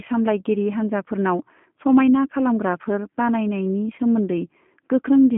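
Speech runs through the whole clip with G.729 codec damage that is plainly audible. The sound has a telephone band from 150 Hz to 3.4 kHz, and nothing above 3.5 kHz survives. The coder fits an 8 kbit/s G.729A link. It models each short frame with a vocal tract filter, a pitch predictor and a few pulses. This leaves the speech intelligible but rough and slightly synthetic.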